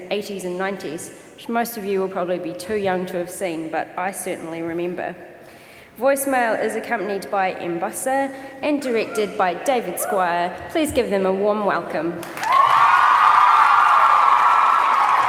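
Nothing stood out as a technical problem on listening to this audio.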